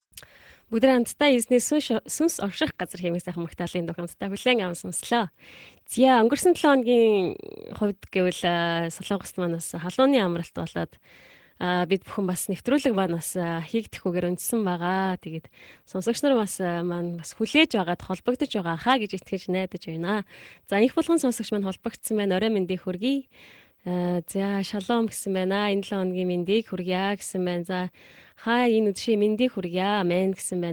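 Opus voice compression affects the whole clip in hybrid mode: linear prediction codes speech below 8 kHz, with a sparse CELT layer reaching 20.4 kHz. The excitation is coarsely coded, so the speech sounds plainly hoarse and slightly robotic, which fits roughly 16 kbps.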